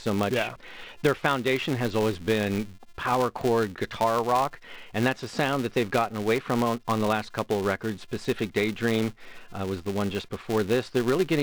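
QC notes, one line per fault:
Throughout: filter restarted on every block, a 345 Hz buzz that rises and falls with the speech level, fitting 128-sample blocks; unlike steady hum, it fades in pauses.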